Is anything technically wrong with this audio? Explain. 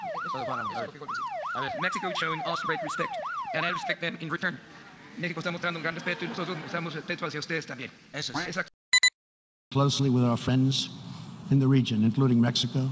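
No, nothing is technically wrong with this audio.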